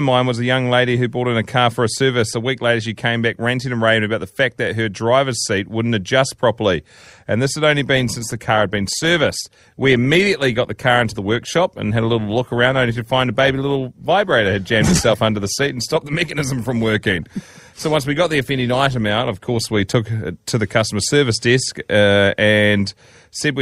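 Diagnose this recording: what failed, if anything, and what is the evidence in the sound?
After "this had only", at 7.95 s, the speech abruptly gains codec artefacts, with no gap, until 19.95 s, before "it to the customer". That is an adaptive stream at a lower bitrate, a network slowdown forcing a rendition switch that fits Opus dropping from 64 to 24 kbit/s.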